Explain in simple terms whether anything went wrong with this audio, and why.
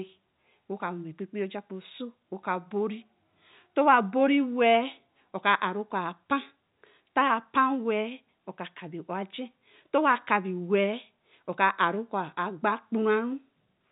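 Nothing went wrong: the speech sounds like an ordinary landline call, with the narrow, slightly boxy quality of G.711 telephone coding, which carries nothing above about 3.8 kHz. That is how this telephone format is meant to sound, not a fault.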